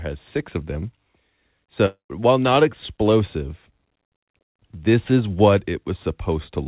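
Long network dropout in this speech clip from 1.86 to 2.11 s: the last sound stretches into a fading buzz, then about 0.12 s of silence, and speech resumes missing roughly 240 ms, likely lost packets. The call path's G.711 coding cuts everything above 4 kHz.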